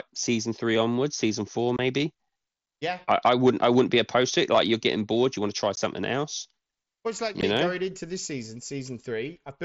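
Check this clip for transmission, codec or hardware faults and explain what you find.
Two kinds of fault are audible in this speech clip: unconcealed Bluetooth headset packet loss at three points, and a stretch of hard clipping. The wideband mSBC headset link carries the speech up to about 8 kHz, with a faint grain on louder sounds that fits a bitrate near 61 kbps.

Unconcealed Bluetooth headset packet loss appears from 1.77 to 1.79 s, right after "season four"; at 5.76 s, after "you want to try"; and at 7.41 s, between "it's like" and "know going into this." Packets travelling from the headset to the phone went missing, and the link filled the gaps with silence rather than patching them. The first hole lasts 22.5 ms, which fits three lost 7.5 ms packets, and the others last 15 ms each. Each one sounds like a tiny click or dropout. On a waveform the trace falls abruptly to a flat line, and a spectrogram shows a thin vertical blank with bright clicks at its edges.

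Hard clipping runs from 3.11 to 4.87 s. During that stretch the signal was driven about 4 dB beyond what a stage in the chain could pass, so the peaks were sliced off flat. The squared-off tops add harmonics far above the speech itself, and these come through as a crackly, fuzzy edge on louder syllables. A waveform shows the peaks pressed against a fixed ceiling, and a spectrogram shows smeared energy reaching up into the highest bands on those peaks.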